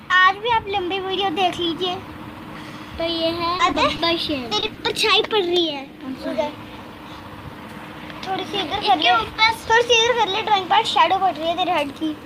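From 3.57 to 4.00 s there's repeated packet loss, a choppy, robotic stretch. Four separate gaps get patched by carrying the last sound forward, and about 20 ms never comes back. At 4.60 s a late packet causes a short stall. The buffer runs dry, so the last sound gets held for about 20 ms with a faint buzz or dip, and then it picks up right where it stopped. Just after that there are two short concealed packet losses, at 4.66 s and 4.74 s. Each one drops about 20 ms and covers it with a quick smear or wobble.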